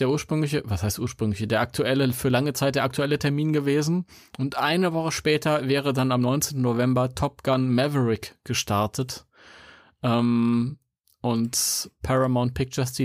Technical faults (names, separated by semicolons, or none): none